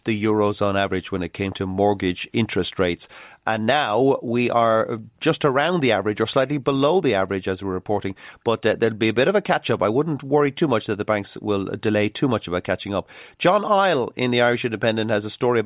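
No technical faults can be heard anywhere in this speech recording.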